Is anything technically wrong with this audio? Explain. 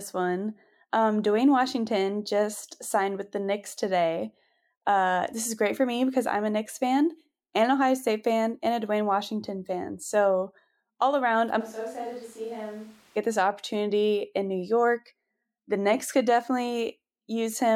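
Yes. From 11.62 s to 13.15 s the speech abruptly turns roomy and hollow, thinner in the low end, and drops by roughly 10 dB, while background noise rises to only about 25 dB below the speech. This is likely a switch to a distant microphone: the close mic's feed dropped out and a farther pickup, such as a camera mic, covered the gap. That mic hears more reflections and ambience, and the return to the close sound at 13.15 s is equally sudden.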